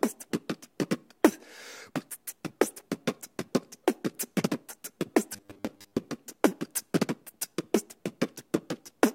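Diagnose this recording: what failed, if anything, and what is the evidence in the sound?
From 5.34 to 5.97 s the sound turns into a rigid, metallic buzz at 100 Hz, a robotic sound from repeated short buffers, likely a driver or buffer underrun looping about 10 ms of audio while about half is skipped. A spectrogram shows evenly spaced harmonic lines; the waveform shows identical repeating segments.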